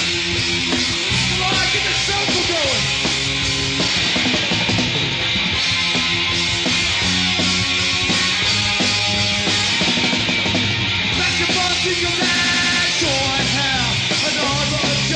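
From 0.0 to 2.0 s, an adaptive stream starting at a low bitrate gives dull, synthetic treble and stronger codec artefacts, which points to a low-bitrate start. It then jumps cleanly to fuller quality.

At 12.35 to 12.82 s, a system hang loop repeats one 92.88 ms slice five times at 10.8 Hz. This fits a 4096-sample ring buffer and produces a machine-gun stutter.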